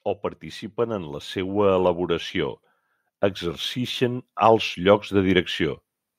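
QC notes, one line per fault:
0.75–2.62 s and 3.74–5.54 s, automatic gain rising: speech and background swell together by about 4 dB, then about 3 dB, as the gain control lifts level over roughly two seconds each time.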